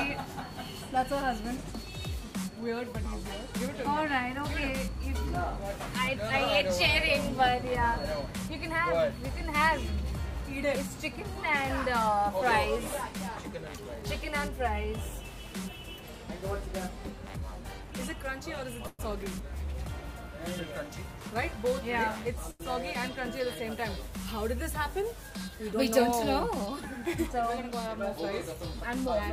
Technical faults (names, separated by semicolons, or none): call audio freeze; short stall from a late packet